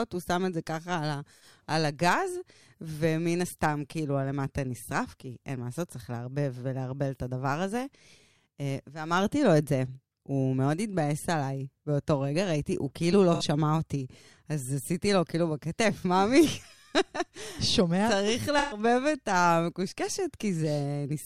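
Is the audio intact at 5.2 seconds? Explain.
Yes, at 5.2 seconds the speech plays through cleanly, with no dropout, click, distortion or other fault to be heard.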